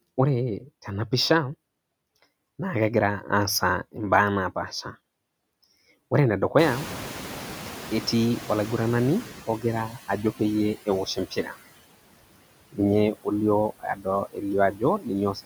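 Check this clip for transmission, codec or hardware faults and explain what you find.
The faults here come from the noise suppressor, not from transmission, the codec or the hardware. It produces steady processing artefacts, a slow reaction when the background gets louder, and three stretches where it eats into the speech.

Noise suppressor artifacts run through the whole clip. The suppressor estimates the steady background in each frequency band and pulls those bands down frame by frame, by about 18 dB here. Because the gain changes from frame to frame, the leftover noise sinks in the gaps and comes back under the voice.

Noise suppressor catching up appears from 6.58 to 9.47 s. The room noise, which is genuine background and not a system fault, jumps by about 22 dB at around 6.5 s. The suppressor's noise estimate lags behind that rise and takes about 2.9 s to settle. During that stretch the reduction is only about 11 dB, so the louder background pushes through. 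It then sinks back as the estimate catches up.

Speech cut by the noise suppressor happens three times: from 9.47 to 10.4 s, from 10.86 to 11.57 s, and from 13.79 s to the end. In each case the suppressor mistakes parts of the speech for noise and turns them down along with the background. The deepest drops are about 14 dB, about 12 dB and about 20 dB. Short pieces of sound, adding up to roughly half a second in the last stretch, come out swallowed or faint.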